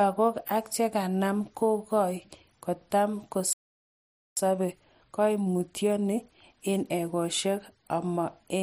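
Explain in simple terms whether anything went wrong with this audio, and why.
Around 3.53 s the speech cuts out for about 0.84 s, a playback stall, likely because the player ran out of data before resuming at 4.37 s. From 4.37 to 7.37 s there's time-compressed catch-up: the speech runs about 1.15 times faster at normal pitch.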